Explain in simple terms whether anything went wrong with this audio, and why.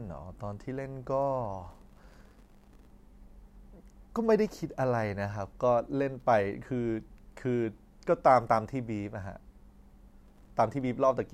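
Yes. Processor overload crackle appears from 1.71 to 2.90 s and from 10.26 to 10.50 s. The computer missed many tiny audio deadlines, each leaving a brief silent gap. Together they crackle.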